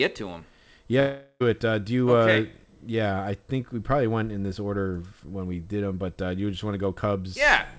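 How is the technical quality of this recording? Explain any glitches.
The recording has one clear glitch, a gap between 1.00 and 1.42 s. It is heard through a call-codec band limit that leaves nothing above 8 kHz, which fits wideband G.722.

From 1.00 s, a long network dropout likely cut the stream, and about 0.4 s of audio never arrived. The receiver stretched the last sound into a fading buzz, then about 50 ms of silence follows before the sound resumes at 1.42 s. On a spectrogram the harmonics smear into a decaying blur and then a blank column. On the waveform the signal tapers to flat.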